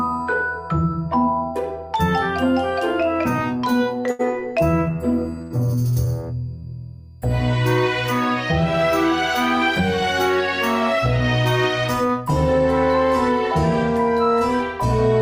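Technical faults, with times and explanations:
4.11–4.34 s and 5.42–5.52 s, short stall from a late packet: each time a packet arrived after its playout slot and the jitter buffer ran dry, so the receiver held the last sound for about 77 ms and then 85 ms. Playback resumed exactly where it left off, so nothing is lost, but a sound is briefly drawn out with a faint buzz or dip. Afterwards everything plays about 77 ms, then 85 ms, later than before.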